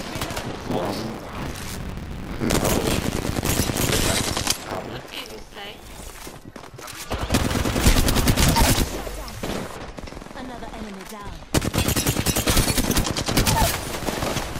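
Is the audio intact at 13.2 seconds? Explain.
Yes, at 13.2 seconds the audio plays through cleanly, with no dropout, click, distortion or other fault to be heard at that moment.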